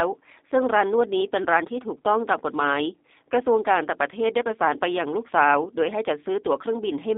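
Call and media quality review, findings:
G.729 codec in the call path, whole clip. Low-rate CELP coding, consistent with G.729A at 8 kbit/s, rebuilds speech from a filter, pitch predictor and sparse pulses. Band limited to 250 Hz to 3.7 kHz; plainly rough, synthetic, buzzy texture.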